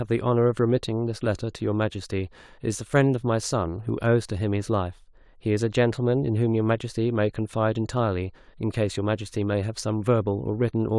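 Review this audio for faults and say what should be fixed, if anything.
No technical faults can be heard anywhere in the speech. Nothing needs fixing.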